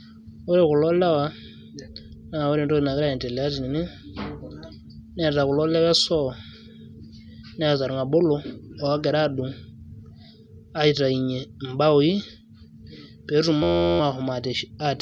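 At 13.63 s the speech gives way to a system hang loop that lasts until about 14.00 s. The computer or its audio driver stalled, but the sound hardware kept replaying its ring buffer. One 11.61 ms slice of audio repeats exactly, over and over. That length fits a 512-sample buffer. Because the slice is so short, it sounds like a steady buzz at 86.1 Hz, not a stutter. Little or no audio appears to be lost.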